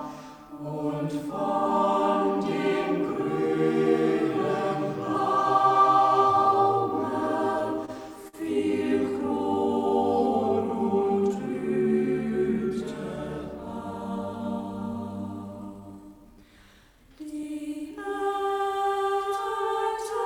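Short stalls from late packets occur at 7.85–7.90 s and 8.28–8.35 s: the jitter buffer ran dry, so the receiver stretched the last sound for about 26 ms, then 51 ms, before resuming. Nothing is lost, but each sound hangs with a faint buzz or dip.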